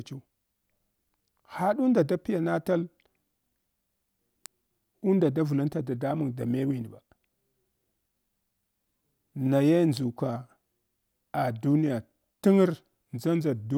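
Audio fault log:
4.46 s and 9.97 s, electrical switching spike: a sharp snap sitting on top of the speech, the first just before "unda davlnta". It's too brief and abrupt to come from the recording itself, most likely an arc from a nearby switch or motor getting picked up on the line.
5.88 s and 12.42 s, block of digital silence: the audio drops out and snaps back with no fade. The first hole is about 1.45 ms, between "unda davlnta" and "da mewin ba", which fits a 64-sample block and comes across as a tick. The second, right after "ah duniya", is about 5.8 ms, consistent with a 256-sample block, so it's a tick or dip.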